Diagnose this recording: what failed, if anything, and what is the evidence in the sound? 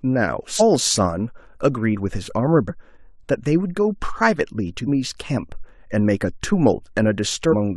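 Codec stage: compressed frames skipped at 0.56, 2.65, 4.83 and 7.48 s. The speech jumps ahead by whole 46.4 ms frames, roughly 200 to 400 ms each time. Those frames were missing from the file or refused by the decoder as damaged, so they were never played.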